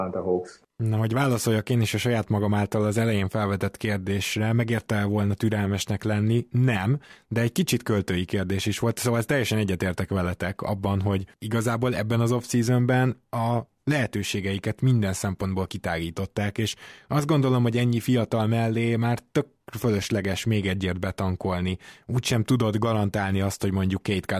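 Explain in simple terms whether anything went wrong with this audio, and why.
Nothing went wrong here, as far as the ear can tell: the speech carries on steadily with no odd sounds or interruptions that would hint at trouble anywhere along the way.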